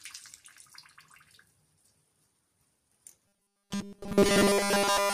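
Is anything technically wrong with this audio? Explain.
Yes. From 3.28 s to the end of the clip there is robotic sound from repeated short buffers. A fixed 200 Hz buzz appears, giving a rigid, metallic tone that only loosely tracks the underlying sound. The likely cause is new audio arriving too seldom, so a roughly 5 ms chunk is replayed to fill the gap for most of the stretch while the real audio is skipped. A spectrogram would show evenly spaced horizontal bands at multiples of 200 Hz. The waveform would show near-identical 5 ms cycles repeating.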